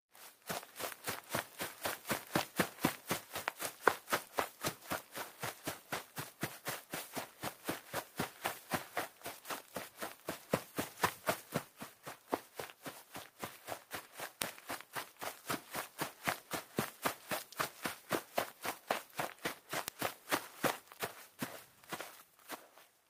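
A bit error spike occurs twice, at 14.42 s and again at 19.88 s. In each case a single flipped bit in memory or on a digital link corrupted two consecutive samples, throwing their values off by a power of two before they snapped straight back. Because the jump bears no relation to the surrounding audio, each event comes through as one isolated, sharp tick, broadband and brief, sitting on top of the sound rather than belonging to it.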